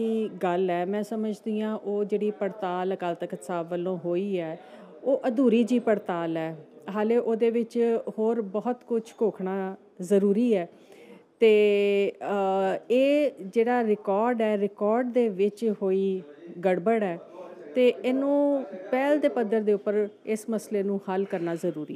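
No technical faults can be heard anywhere in the audio. There is nothing here that needs a timestamp or a description.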